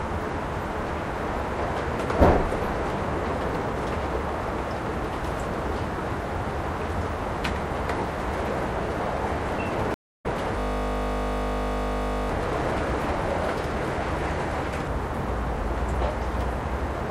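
A recording of everyday sounds with two faults close together. At 9.94 s there is a stream reconnect. The audio drops out for 223 ms, until 10.26 s. It then resumes about a fifth of a second further on, so a slice of sound is skipped. This is what happens when the connection breaks and the player restarts its decoder mid-stream. From 10.60 to 12.29 s comes a system hang loop. A single 20 ms fragment repeats exactly, 85 times over. Repeating every 20 ms, it becomes a steady 50 Hz buzz rather than a stutter. The computer or driver froze while the sound hardware kept replaying the same short stretch of its buffer.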